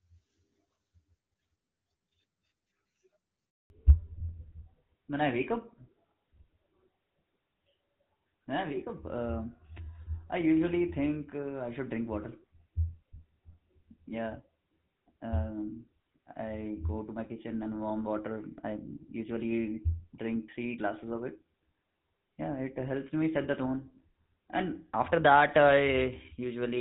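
At 3.50 s the speech cuts out for 200 ms. This is a handover gap. The call moved from one network to another, and no speech frames arrived during the switch. The sound dies away quickly and stays silent until 3.70 s. Anything said then is lost.

From 3.70 s to the end comes a fallback to narrowband. Before the gap, the clear HD Voice sound fits AMR-WB near 12.65 kbit/s. Afterwards it fits the older GSM full-rate codec. Nothing above 4 kHz remains. Speech sounds duller and rougher.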